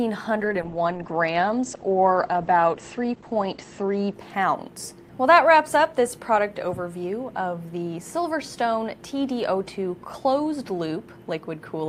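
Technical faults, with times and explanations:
0.37–5.37 s, call bitrate drop: the bandwidth estimate fell, forcing the encoder from what sounds like about 48 kbps to about 11 kbps, bottoming out for about 3.2 s. Coarser coding turns the sound rough and watery, and bandwidth shrinks from 20 kHz to 8 kHz, muffling it.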